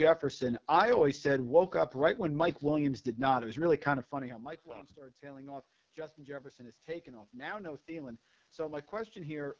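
From the first moment to the last, the speech sounds rough and raspy, with a grainy, buzzy edge on every syllable and a hissy, artificial sheen at the top of the band. This is the AMR wideband (HD Voice) codec working at the bottom of its range. The heavy damage fits its lowest 6.6 kbit/s mode, where the pulse model of the voice is too coarse and the region above 6.4 kHz is only shaped noise.

From 3.04 s to 9.55 s the level swells slowly, and the room noise rises along with the voice. This is automatic gain rising. Around 4 s the talker moved further from the microphone and the input fell by about 21 dB. The gain control read that as too quiet and pushed its gain up by about 10 dB over several seconds, amplifying voice and room alike.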